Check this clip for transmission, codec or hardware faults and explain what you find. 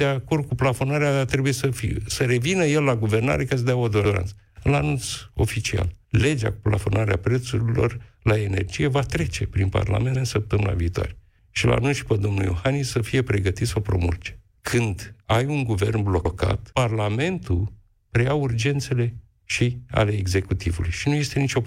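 One fault shows up, overlapping chunks, recurring at 4.05, 10.15 and 16.25 s. The audio was handled in 6-second chunks, each starting 100 ms before the previous ended, so that slice replays as a stutter. The waveform shows a duplicated 100 ms segment with a discontinuity at each join, and the spectrogram shows a vertical click line.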